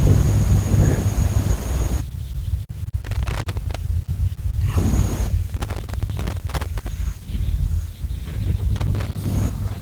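A speech recording with loose connector crackle in three places. Bursts of irregular crackle and scratching run from 3.05 to 3.76 s, from 5.49 to 6.88 s, and from 8.76 to 9.26 s. A worn or dirty contact is making and breaking as the cable or plug shifts. That chops the signal on and off in rapid, uneven steps. The light, full-band Opus coding underneath is working normally.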